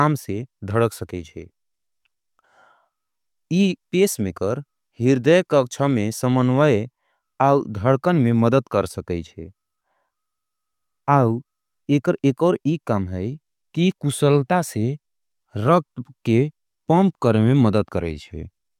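Listening to the speech in this clip, nothing stood out as a technical problem at any point.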